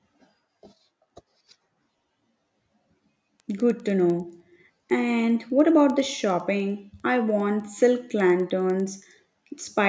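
Resampler restarted on every block, throughout: each 100 ms block was converted separately, consistent with 44.1 kHz to 16 kHz, leaving edge errors heard as steady 10 Hz ticks under the speech.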